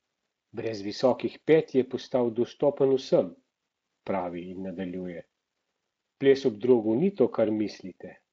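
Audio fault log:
No faults in this speech; it carries a wideband Speex path at a high setting, which fits a bitrate around 34 kbps, with content stopping near 7.7 kHz and coding damage faint at most.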